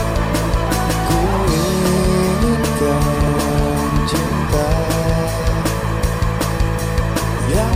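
Sharp single clicks land at 0.67, 1.98, 3.28, 4.27 and 6.14 s. Each one's likely dropped samples: well under a millisecond goes missing, so the waveform jumps straight to a later value, leaving a thin vertical line in the spectrum without losing any audible sound.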